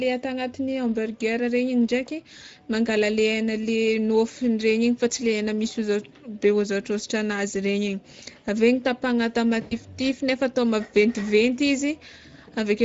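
A speech clip carrying plainly audible Speex codec damage throughout: the voice sounds noisy and hoarse, with a rough, excitation-starved texture typical of a CELP coder short of bits. The degree of damage points to a mid-range setting of roughly 16.8 kbps. At 9.61 to 9.77 s there is VoIP packet loss concealed by the speech codec. About 100 ms of audio is missing, consistent with five 20 ms frames, and the decoder fills the gap by extending the last pitch and filter into a sound that fades, and the voice stays weak briefly after normal decoding resumes.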